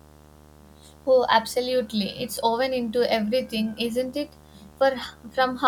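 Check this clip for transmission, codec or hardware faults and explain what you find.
A video or display buzz runs through the whole speech clip. A screen or video cable is coupling into the audio path, injecting a buzz at its 75 Hz field rate. It sits roughly 25 dB below the speech. It sounds like a steady, rasping hum with hash riding above it.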